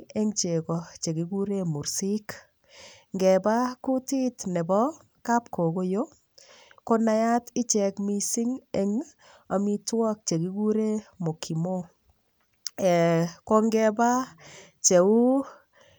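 No technical faults turn up anywhere in this speech recording, so there's nothing to flag here.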